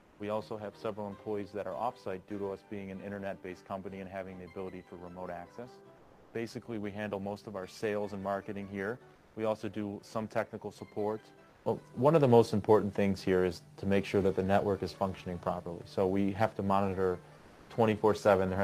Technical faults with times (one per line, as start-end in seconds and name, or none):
0.00-0.19 comfort noise in place of the background
5.97-6.33 comfort noise in place of the background
9.15-9.35 comfort noise in place of the background
11.49-11.65 comfort noise in place of the background
17.37-17.69 comfort noise in place of the background